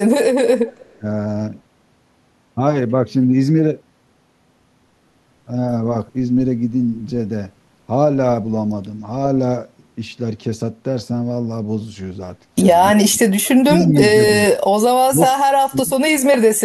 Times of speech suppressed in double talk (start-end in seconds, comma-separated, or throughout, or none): 0.94-1.04, 12.94-13.93, 14.33-14.44, 15.06-15.90